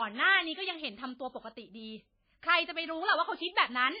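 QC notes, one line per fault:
Throughout: low-bitrate audio saved at a high bitrate. Smeared, warbly speech that fits an MP3 near 19 kbit/s, likely re-saved at a much higher rate; the spectrogram looks blocky and patchy.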